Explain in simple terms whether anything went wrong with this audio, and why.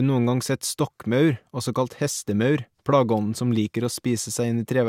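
Nothing went wrong here: the recording comes across as speech with no technical faults to be heard anywhere in it.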